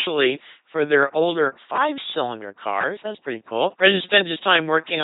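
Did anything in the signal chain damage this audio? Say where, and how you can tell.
Yes, at the codec stage: the whole speech clip has the buzzing, robotic quality of an LPC-10 vocoder, with nothing above about 3.9 kHz, which fits a 2.4 kbit/s coder. Each moment is rebuilt from a pulse train or noise through a small all-pole filter, so the damage is heavy.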